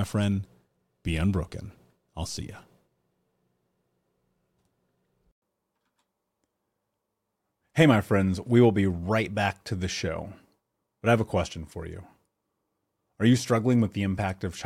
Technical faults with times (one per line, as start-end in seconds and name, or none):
none